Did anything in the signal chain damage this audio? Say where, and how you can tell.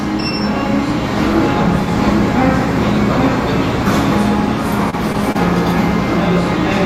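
Yes, at the network stage. At 4.90 to 4.95 s there is short concealed packet loss: about 20 ms of audio never arrived, and the decoder bridged a 26 ms span by extrapolating the preceding sound before blending back, leaving a brief smear or wobble where detail is missing.

At 5.32 to 5.37 s a short stall from a late packet appears: the jitter buffer ran dry, so the receiver held the last sound for 28 ms until the packet landed. Nothing is lost, but playback slips 28 ms later, heard as a stretched moment with a slight buzz or dip.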